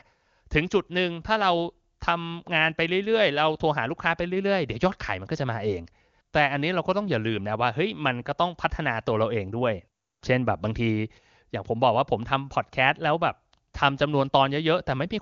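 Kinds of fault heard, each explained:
No faults can be heard in this speech recording. It has been carried over an AMR wideband (HD Voice) link with nothing above about 7.3 kHz, and any codec damage is faint at most, which fits the codec's top 23.85 kbit/s mode.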